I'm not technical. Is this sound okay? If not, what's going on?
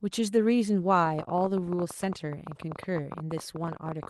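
No. From 1.06 to 4.06 s, a train of clicks ticks over the speech, about 14 per second, unevenly spaced. It is likely interference from nearby equipment.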